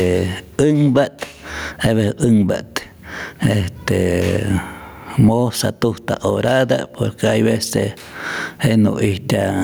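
Gain pumping runs through the whole speech clip: loud and soft parts end up closer in level and the sound is squashed, with the gain swinging around 20 dB. The likely cause is input gain set far too high, with a fast limiter clamping it back. A noise gate would instead silence the gaps.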